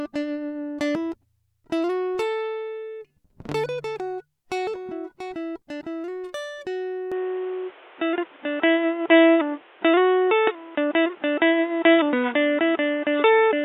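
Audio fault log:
7.12 s to end, input switched to a poorer device: with no gap at the switch, the music abruptly loses everything above 3.8 kHz and turns dull and boxy, its level shifts by about 5 dB, and a new background noise sits about 30 dB below the music. The likely cause is the system moving its capture to a different, lower-grade input, such as another microphone or a headset's call profile, with a narrower passband and its own noise floor.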